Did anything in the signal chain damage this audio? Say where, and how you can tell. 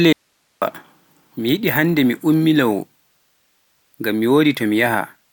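Yes. An audio dropout to a faint residue runs from 0.13 s to 0.62 s: the speech cuts off abruptly for about 0.49 s, leaving only hiss roughly 50 dB below the signal, then returns just as suddenly. The path stayed live, so the stage is likely an analogue connection briefly breaking. On a waveform the gap shows as a near-flat strip with vertical edges; a spectrogram shows a faint, even noise band with no harmonics.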